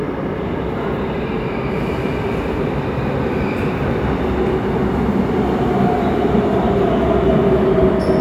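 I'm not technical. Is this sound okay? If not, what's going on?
Yes, this sound is okay. Nothing in it points to a technical problem.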